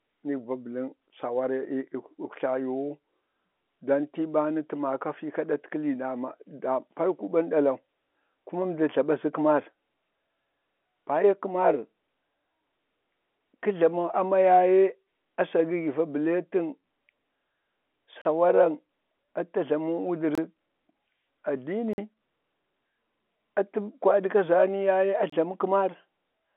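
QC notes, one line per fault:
18.22 to 25.30 s, block of digital silence: the speech drops out to silence four times, at 18.22 s for about 36 ms, 20.35 s for about 25 ms, 21.93 s for about 46 ms and 25.30 s for about 27 ms. Each hole starts and ends with no fade, giving a brief gap that reads as a short hole. That's likely the output buffer not getting filled in time; the 46 ms one fits a 2048-sample block. The whole thing is on a telephone-band line that tops out near 3.8 kHz, and the line itself shows little or no coding damage.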